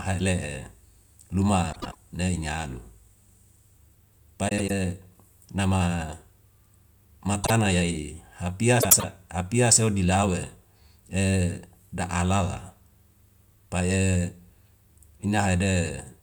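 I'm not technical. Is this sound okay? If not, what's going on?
No. There are frames out of order: small chunks of the audio arrived swapped with their neighbours and were played that way. It happens at 1.73–1.95 s, 4.48–4.71 s, 8.80–9.04 s, and briefly at 7.44–7.51 s. Each time, a short stretch of speech plays with its two halves reversed, heard as a garbled flutter. Nothing is missing. The order is just wrong for a moment.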